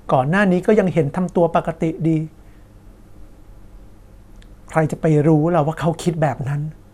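At 0.62 s a brief burst of DAB burbling appears, and from 6.28 to 6.46 s a longer stretch follows. Weak reception lets bit errors slip past error correction into the MP2 data at a rate of a fraction of a percent, corrupting samples and scale factors, so individual sub-bands jump in level for up to a frame. It sounds like short blips of noise in single sub-bands over the speech. A spectrogram shows isolated, blocky bright patches in narrow bands; the waveform shows small irregular bumps.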